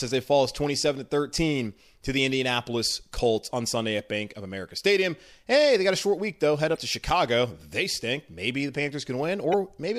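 At 6.73 to 6.77 s and again at 9.50 to 9.54 s, the speech is briefly disrupted. This is damaged data in a compressed stream. Corrupted bytes made the decoder misread those frames and lose sync until it found a valid frame header.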